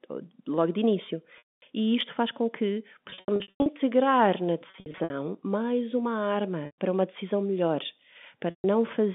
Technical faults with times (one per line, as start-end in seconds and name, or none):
1.38-1.62 packet loss with pitch repetition
3.10-3.66 packet loss with pitch repetition
4.70-5.10 packet loss with pitch repetition
6.66-6.74 packet loss with pitch repetition
8.50-8.64 packet loss with pitch repetition